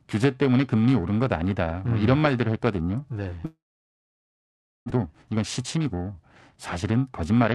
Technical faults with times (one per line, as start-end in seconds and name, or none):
0.00-7.54 periodic clock jitter
3.45-4.92 long network dropout
4.94-7.52 jitter buffer speed-up